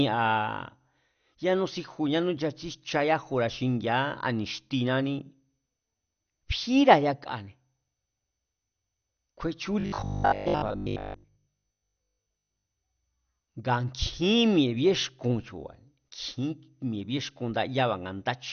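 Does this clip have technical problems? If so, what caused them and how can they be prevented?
Yes. Throughout, the speech sounds dull and gurgling, with nothing above 6.5 kHz. This is likely MP2 compression at a low bitrate, perhaps 48 kbps, switching off upper sub-bands. To prevent it, encode at a higher bitrate or use a more efficient codec.

From 9.80 to 12.70 s, the speech turns into a rigid metallic buzz at 50 Hz. This is likely robotic sound from repeated short buffers: a 20 ms chunk loops over most of that stretch. To prevent it, enlarge the buffer and make sure audio arrives steadily.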